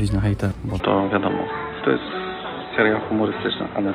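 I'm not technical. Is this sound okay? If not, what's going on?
No. From 0.80 s to the end the sound turns dull and muffled, with a slight level shift and faint new background noise, likely an input switched to a poorer device.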